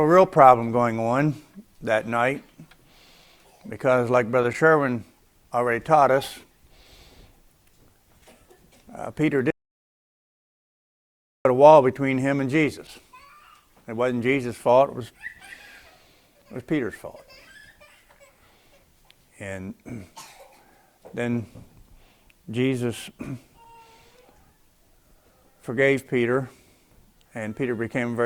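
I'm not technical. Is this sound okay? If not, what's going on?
No. Something in the recording chain briefly lost its input, most likely a loose or disconnected device, a dropped link or an accidental mute, while the recorder kept running and writing pure silence. This is an audio dropout to silence: from 9.51 to 11.45 seconds, about two seconds, the sound cuts off abruptly into total dead air, with not even background hiss, then returns mid-flow. Whatever happened during that gap is lost.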